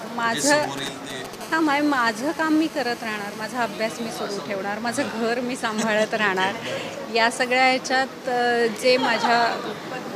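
From 0.63 s to 1.35 s there are GSM signalling bursts: a nearby 2G handset is exchanging short control transmissions with the network rather than carrying a call, and the audio circuitry demodulates the radio pulses by rectification. What comes through is a galloping dit-dit-dit of brief buzzy fragments, each fragment pulsing at 217 Hz. It sits roughly 10 dB under the wanted sound.

At 1.41 s the pattern changes to continuous GSM phone buzz, which runs until 4.20 s. The handset has moved into a call and now transmits its bursts steadily at 217 per second. Rectified in the audio path, that pulse train becomes a hard, rasping tone at 217 Hz, dense with harmonics and bearing no relation to the programme material. The buzz sits at about 20 dB below the signal and holds nearly steady for its full duration.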